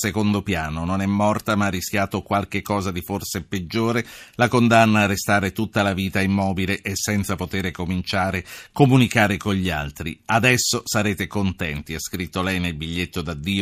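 Two unsynchronised clocks likely drifting apart cause clock slip clicks from 0.48 to 13.45 s: single-sample slips produce faint, regular ticks about every 0.7 seconds.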